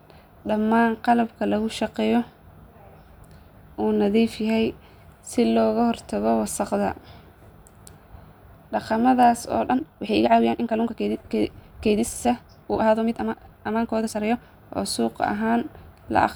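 From 9.64 to 14.42 s the speech suddenly rushes at about 1.94 times speed with pitch unchanged, likely a time-stretched section squeezed to fit.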